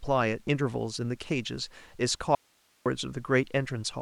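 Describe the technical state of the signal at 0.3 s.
At 0.3 s the speech signal is intact, with no dropout, clipping, distortion or other fault audible at that point.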